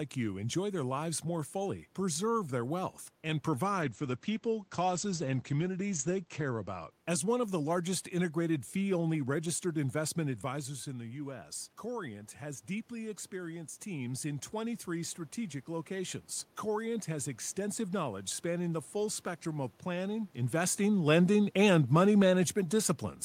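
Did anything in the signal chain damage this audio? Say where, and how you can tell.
Yes. From 3.82 s to 6.97 s, just after "preserve their wealth and", the speech turns muffled and rough, with the airy top end gone and a watery, coarse texture before clarity returns. This is a call bitrate drop at the codec and network stage. The bandwidth estimate fell and the Opus encoder went from 32 kbps to 14 kbps, holding the lowest rate for about 2.65 s. At that rate it coded more coarsely and cut the audio band from 20 kHz to 8 kHz.

From 10.5 s to 16.28 s, after "fee only registered investment", the level swells slowly, and the room noise rises with the speech. That shared rise points to automatic gain rising in the call processing stage. Around 10 s the talker moves off the microphone, and the input drops by about 9 dB. The automatic gain control hears that quieter signal and raises its gain gradually, by about 6 dB, over several seconds.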